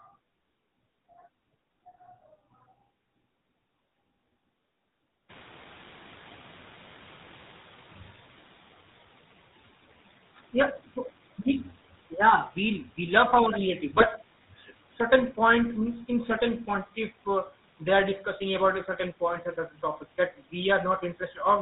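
Throughout the speech, the GSM full-rate codec is plainly audible. It models the vocal tract and excites it with a regular pulse train built from only every third excitation sample, so voiced sounds take on a buzzy, gravelly roughness. Nothing above 4 kHz survives, which leaves the speech dull and boxed-in. The quality sits at the level expected from the 13 kbps full-rate coder.

At about five and a half seconds the room noise jumps by about 25 dB, ending up about 26 dB below the speech. The noise suppressor is caught out by the jump, and its catching up runs from 5.29 s to 8.62 s. Its noise estimate lags the new level, so the background first comes through with little reduction. Over roughly 3.3 s it then sinks by about 8 dB as the estimate adapts.

From 13.94 s to 14.06 s, GSM bit errors break up the speech. Corrupted filter, pitch and gain parameters reach the decoder, bending the spectrum and throwing the level around from one frame to the next. 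The result is a short burst of squawks, pops and gargling. Its 120 ms length fits about five damaged 20 ms frames, with a bit error rate of about 1.3 percent on a weak link.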